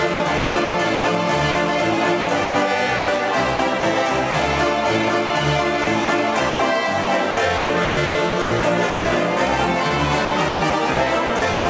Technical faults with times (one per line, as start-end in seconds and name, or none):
0.14-1.55 sound chopped by the voice detector
2.21-4.34 sound chopped by the voice detector
5.27-5.30 sound dropped by the voice detector
5.84-9.05 sound chopped by the voice detector
10.25-11.66 sound chopped by the voice detector